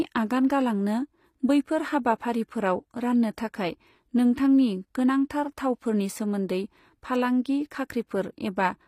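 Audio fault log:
throughout HE-AAC compression: the treble was likely rebuilt from copied lower bands rather than coded, at a low bitrate that fits about 24 kbps, so s sounds come out gritty and lispy, the damage is plainly audible, and nothing remains above 15.5 kHz.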